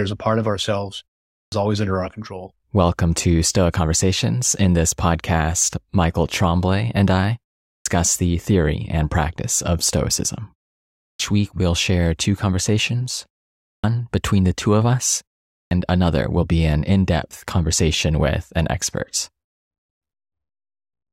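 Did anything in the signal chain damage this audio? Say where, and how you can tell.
Yes: a clipped start after a pause, at the playback output, at 1.36, 7.71, 11.03, 13.68 and 15.56 s. After 0.34 to 0.56 s of silence, the device wakes late and swallows 146 to 165 ms, as before "always under our control". The waveform jumps straight from flat to full level, and the spectrogram shows no onset.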